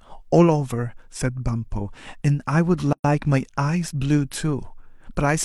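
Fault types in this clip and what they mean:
Gap at a join of encoded pieces: at 2.93 s the speech drops into a silence of about 116 ms, ending at 3.04 s, then resumes exactly where it left off. The audio was encoded as separate pieces, with joins repeating every 4.0 s, and butted together untrimmed, so one run's end padding and the next run's start-up delay both remain as dead air. The codec smears the edges of the hole, so the truly silent part is shorter.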